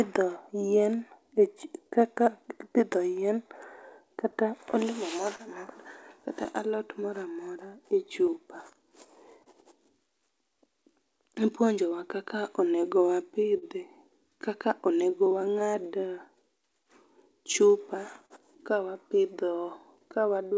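A speech recording carries clock drift between sender and receiver: the sending clock runs roughly 3% slow, so the jitter buffer keeps draining and the receiver must stretch the audio rather than cut it. Unlike a single glitch, the effect never settles but persists for the whole clip. The repeated timing corrections run from 0.004 s to 20.57 s at 98% speed, adding something like 400 ms in total. They come as small, unevenly spaced stretches, all lengthening, heard as a faintly dragging, unsteady tempo rather than as dropouts. Scattered short gaps appear at 0.05 to 1.94 s (a few tiny ones, each only several milliseconds), 4.31 to 6.48 s (around five, the longest about 30 ms), and 17.25 to 18.33 s (around three, the longest about 40 ms). Each is patched by continuing the last sound, giving brief ticks or smears, with nothing actually lost. A short stall from a late packet, distinct from those clusters because it is a single held sound, occurs at 9.43 to 9.49 s, filling 30 ms, and again at 13.58 to 13.65 s, filling 42 ms, each with a slight buzz or dip before the audio resumes in place. 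The call path's G.722 coding at 64 kbps passes nothing above 8 kHz.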